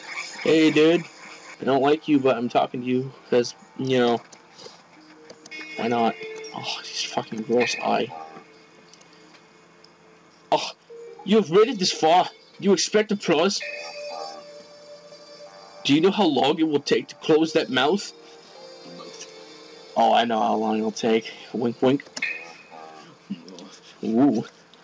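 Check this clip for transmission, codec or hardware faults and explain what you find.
No transmission, codec or hardware faults can be heard in this clip. The audio came through a call path whose content stops at 8 kHz, which fits the wideband G.722 codec running as designed.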